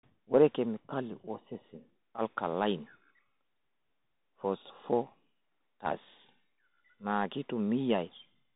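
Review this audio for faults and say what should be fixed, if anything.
Throughout, the speech sounds dull and narrow, with scratchy s sounds and a granular hiss beneath it. This is the Bluetooth CVSD headset codec: one-bit step coding that cuts everything above 4 kHz. Record through a wired or built-in microphone, or a wideband headset mode, rather than the narrowband hands-free link.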